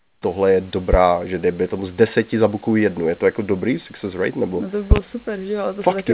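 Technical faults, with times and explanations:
0.00–0.22 s, comfort noise in place of the background: The opening 0.22 s, just before "tohle je", is a smooth, featureless hiss about 20 dB quieter than the room noise that follows, which sits about 37 dB under the speech. The room's texture is missing there. The likely cause is discontinuous transmission: with no speech detected, the sender sent no audio, and the receiver filled the gap with synthetic noise shaped only roughly like the background.
0.93–0.96 s and 4.91–4.99 s, loud pop: A single sharp pop falls between "tohle je" and "že dejme tomu z", peaking roughly 10 dB above the speech. A double pop follows "to by", reaching about 20 dB above it, with the speech continuing underneath both. A sudden voltage step or spike, likely from a switch, connector, static or driver glitch, entered the signal. The circuitry after it shaped each spike into a thump, and the second event has two in quick succession. 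Both pass through the call path, which carries nothing above 4 kHz.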